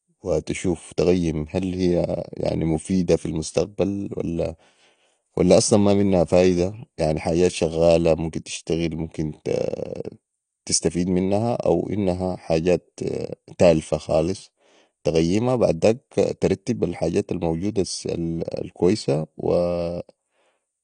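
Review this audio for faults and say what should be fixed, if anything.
The whole speech clip carries plainly audible AAC compression: nothing above 9.8 kHz, so it sounds dull and lacks air. That's likely an AAC-LC encode at a starved bitrate, which fits around 32 kbps, where the encoder cuts the top band and quantises what's left coarsely. Re-export from the original source at 128 kbps or more, or keep it lossless until final delivery.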